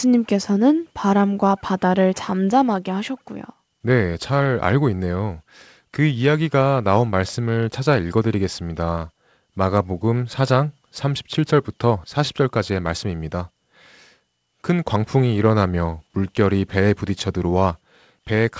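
No technical faults can be heard anywhere in the speech. It has passed through a WebRTC call path working as intended, and the absence of anything above 8 kHz fits a wideband call codec such as G.722.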